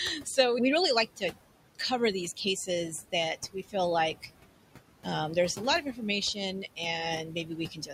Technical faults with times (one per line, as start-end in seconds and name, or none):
0.00-7.93 noise suppressor artifacts
3.42-3.74 speech cut by the noise suppressor
7.28-7.93 speech cut by the noise suppressor